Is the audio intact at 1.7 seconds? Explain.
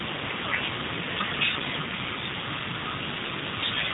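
No. At 1.7 s, as throughout the speech, G.729 codec damage is plainly audible: content stops near 3.8 kHz, and speech rebuilt from a vocal-tract filter, pitch predictor and sparse pulses sounds rough and synthetic, consistent with an 8 kbit/s codec.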